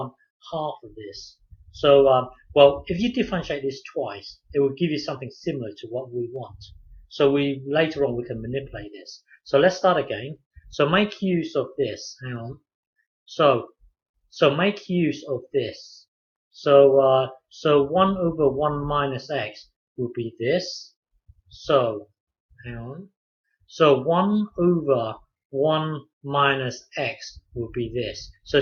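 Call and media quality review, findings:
No transport, capture or playback faults observed; the signal is continuous and intact throughout, with no dropouts, discontinuities or level anomalies.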